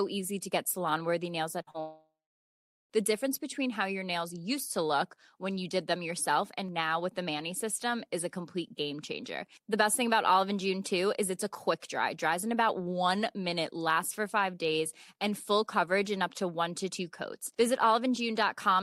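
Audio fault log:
1.61–1.69 s, burst of packet loss: Right after "salon worthy nails at", about 60 ms of audio goes missing in one run. The receiver has nothing new to decode, so it extends the last sound for about 53 ms and lowers it as the gap continues. That makes a short held buzz or fading hiss. The sound then picks up slightly further along, so a sliver of the original never plays.
1.71–1.76 s, short concealed packet loss: A smaller hole of about 40 ms follows almost at once. The decoder fills about 33 ms of it. It continues the preceding sound from its pitch, or as shaped noise if there is no clear pitch, then blends back into the real audio. The result is a quick smear or wobble, and a brief consonant-like sound here may simply disappear.
1.80–2.92 s, long network dropout: Still just after "salon worthy nails at", the sound stalls for about 1.1 s. At first the last sound carries on as a buzz or hiss that dies away. 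Then about 0.79 s of silence remains before the audio returns further along, with the intervening stretch gone. The likely cause is a stall in the network path, where no audio arrived for over a second and the receiver could only conceal, then go quiet.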